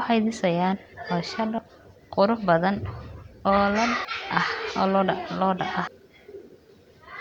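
At 1.58 to 1.62 s, 4.05 to 4.08 s and 5.87 to 5.90 s, the speech breaks into a brief glitch. Each is damaged data in a compressed stream. Corrupted bytes make the decoder misread frames and lose sync. It then searches for the next valid frame.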